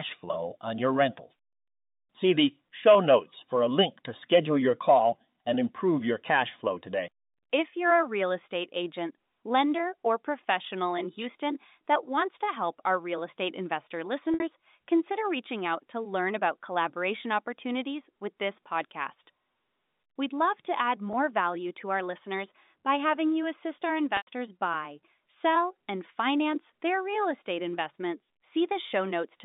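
Packet loss with pitch repetition hits at 2.94 s, before "notes for a link", and 21.13 s, after "love to add". The last pitch period repeats to fill each 10 ms gap, a brief buzzy hold. Longer losses fade toward silence: 60 ms at 14.34 s, then 100 ms at 24.17 s.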